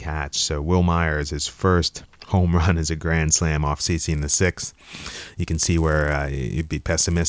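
Speech with a resampler restarted on every block from 3.8 s, just after "a grand slam off", to the end. Each 10 ms block is converted separately, probably from 44.1 kHz to 16 kHz, leaving edge errors heard as a 100 Hz buzz riding the signal. A spectrogram shows thin vertical stripes every 10 ms, and the waveform shows small periodic discontinuities.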